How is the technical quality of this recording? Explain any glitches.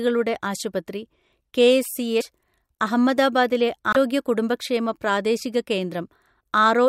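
Two short glitches interrupt the speech, at 2.20 to 2.23 s and 3.93 to 3.97 s. Each is a brief skip. The likely cause is a broken MP3 bit reservoir: after dropped frames, the next frame reads borrowed bytes from the wrong frame. The timing fits 24 ms frames.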